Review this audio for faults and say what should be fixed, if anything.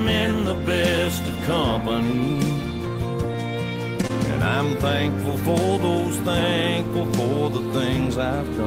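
A short stall from a late packet occurs between 4.01 and 4.05 s. A packet arrived after its playout deadline, the jitter buffer ran dry, and the receiver held the last sound for about 17 ms until the packet turned up, then resumed from the same point. Nothing is lost, but that moment is stretched, with a faint buzz or dip, and everything after it plays 17 ms later than before.

A short concealed packet loss follows between 4.07 and 4.11 s. This time 20 ms of audio never reached the decoder. The receiver covered the gap with about 21 ms of synthesized continuation of the preceding sound and then cross-faded back into the real signal. The result is a brief smear or wobble right after the stall.

A larger or adaptive jitter buffer, together with forward error correction or redundancy for lost packets, would prevent them.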